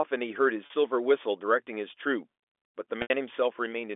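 At 0.66 s there's a brief packet loss with pitch repetition, about 40 ms long (roughly two 20 ms packets' worth), where the receiver loops the last pitch period and you hear a slightly held, buzzy blip. At 3.02 s the gap runs to 80 ms, longer than the roughly 50 ms fade, so the repeat dies toward silence before the speech cross-fades back in around 3.10 s, all over the narrowband G.711 phone line.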